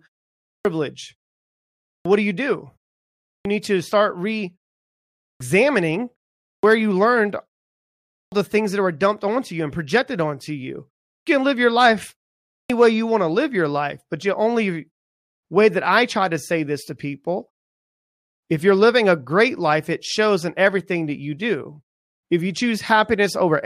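Speech resumes abruptly, its opening sounds missing, at 0.52, 1.91, 3.32, 5.26, 6.48, 8.18, 11.14 and 12.56 s. This is a clipped start after a pause: the output device sleeps during silence and needs about 130 to 150 ms to wake, swallowing each onset.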